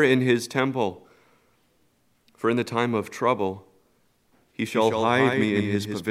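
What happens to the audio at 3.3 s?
Nothing goes wrong at 3.3 s; the audio plays through that moment intact, with no dropout, click or distortion.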